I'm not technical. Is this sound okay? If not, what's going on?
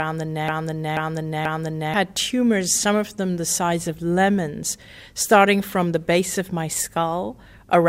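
No. From the very start until about 1.94 s there is a broken-record loop: a piece of sound about 0.48 s long repeats three times, identical and back to back, likely because playback or streaming stalled. Unlike an echo, each repeat is exact and doesn't fade.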